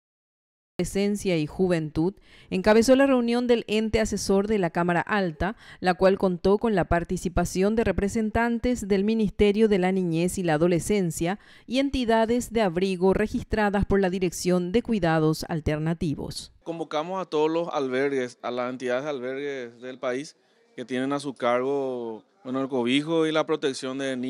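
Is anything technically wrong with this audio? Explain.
Yes. A cut-off start runs from 0 to 0.79 s: the opening is digital silence, and then the audio begins abruptly at 0.79 s partway through a sound. This happens when capture or the stream starts late, after the sound has already begun, so its natural onset is missing. Instead of building from a quiet attack or fade-in, the signal jumps straight from nothing to full level, making the start sound chopped and truncated.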